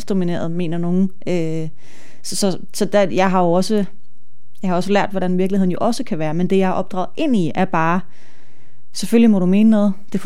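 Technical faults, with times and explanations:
Throughout: DC offset. The whole speech waveform sits off the zero line by a constant amount, about -21 dBFS. This shift cannot be heard as a tone or noise, because it does not vary. It still costs headroom, since peaks on one side reach full scale sooner than they should. In the spectrum it shows as steady energy at 0 Hz, below the lowest frequency of the speech.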